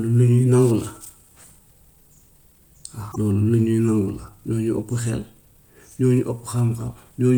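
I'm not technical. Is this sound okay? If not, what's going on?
No. At 3.11 to 3.16 s the speech jumps ahead, leaving a brief glitch. This is likely a broken MP3 bit reservoir: a piece of the file went missing, so the next section borrowed the wrong stored data and decoded briefly as a glitch.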